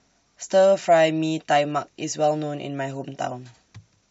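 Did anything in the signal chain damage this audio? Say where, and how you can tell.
No, nothing in the signal chain audibly damaged this speech recording. No stage, from capture through to playback, leaves a mark that can be heard at any point in the clip.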